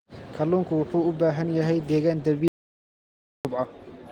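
Audio dropout to silence from 2.48 to 3.45 s: after "baahan yahay deegaan" the speech cuts to dead silence for about 0.97 s, likely from lost input.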